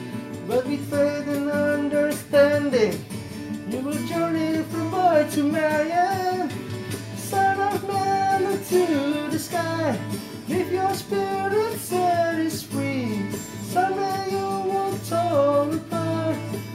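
No technical faults are audible anywhere in the recording.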